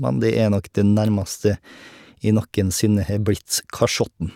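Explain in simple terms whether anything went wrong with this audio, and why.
Listening to the speech in this recording, nothing stood out as having gone wrong.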